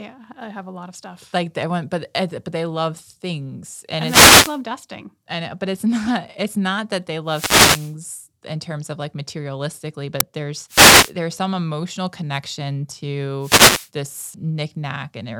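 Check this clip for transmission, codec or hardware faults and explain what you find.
Two kinds of fault turn up in the speech: repeated wireless microphone noise hits and a single uninitialised buffer burst.

Wireless microphone noise hits occur at 3.97 to 4.62 s, 7.26 to 7.96 s, 10.68 to 11.13 s and 13.40 to 13.90 s, each lasting roughly half a second to 0.7 s. As multipath reflections cancel the FM carrier, the receiver's noise floor climbs and swamps the speech, heard as a swish of static. On a spectrogram each appears as a broadband haze rising over the voice; the waveform shows a thickened noisy envelope rather than a sharp spike.

The uninitialised buffer appears at 10.20 s, about 5.3 ms long, which fits a 256-sample block played before audio had been written into it. Whatever stale memory sat there was output as samples, giving a very brief, loud crack. The waveform shows a narrow slab, and the spectrogram shows a thin vertical stripe spanning the whole frequency range, distinct from the longer wireless hit that follows shortly after.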